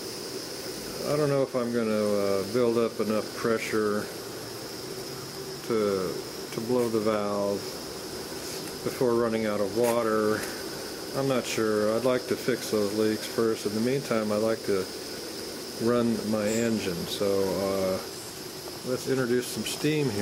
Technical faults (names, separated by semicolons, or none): none